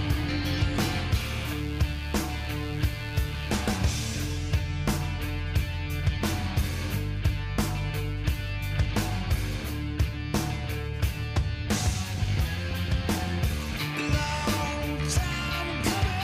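From 1.14 s to 3.94 s a steady, raspy mains buzz sits under the sound, roughly 20 dB below it. Sharp switching spikes from something like a dimmer, a rectifier or an unshielded line got into the signal path, arriving twice per cycle of the 50 Hz supply. Their harmonics climb well into the kilohertz range, which gives the buzz its edge. A plain hum would be a smooth, low 50 Hz tone without that bright, gritty top.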